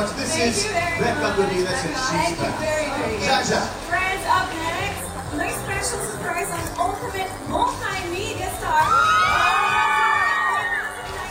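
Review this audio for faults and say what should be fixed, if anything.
There's a DECT cordless phone buzz running through the whole clip: a steady, thin buzz at 100 Hz with a stack of harmonics above it, sitting around 20 dB below the audio. A DECT handset or base station nearby sends a short radio burst every 10 ms, and something in the audio path rectifies those bursts into this tone. Keep DECT phones and bases well away from the mic, cables and interface while recording.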